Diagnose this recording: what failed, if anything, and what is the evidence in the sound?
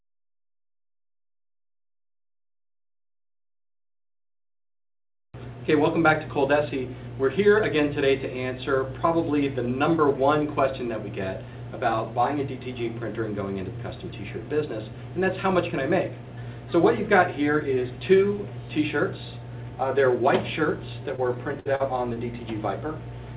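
Short concealed packet loss at the network stage: brief smears at 21.16 s, 21.75 s and 22.14 s, each 20 to 40 ms, where the receiver extended the preceding sound and blended back. Unlike a dropout or click, there is no silence and no hard edge.

A burst of packet loss, also a network fault, runs from 21.60 to 21.67 s. About 60 ms was lost, and the concealment held the last sound while fading it before playback resumed further on. The fade and the skipped material set it apart from the short smears. All of this sits within a call path band-limited to 4 kHz, which fits a 64 kbps G.711 codec.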